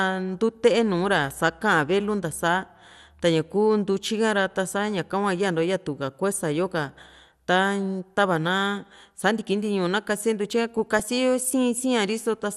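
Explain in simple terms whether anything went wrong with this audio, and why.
Two things went wrong with this speech recording.

Throughout the clip the sound is dull and plainly gurgly, with a grainy edge on the voice. This is likely MP2 compression, the audio format used for DAB digital radio. It splits the sound into many narrow frequency bands and shares out a limited budget of data among them. Here the budget was tight, so the highest bands drop out and flicker, and what remains is stored roughly, which gives the muddy, granular texture.

From about 10.75 to 11.05 s there is a short burst of DAB burbling laid over the speech. It happens when a weak radio signal lets a small share of the received data arrive wrong, slipping past the receiver's error correction. Wrong values then put short blips of noise into individual frequency bands for a split second at a time, before the reception steadies again.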